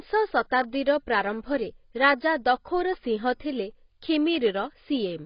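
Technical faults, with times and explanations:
Throughout, AAC compression: speech sounds dull and smeared with nothing above 5.1 kHz, a hard spectrogram ceiling, likely from low-bitrate AAC-LC around 16 kbps.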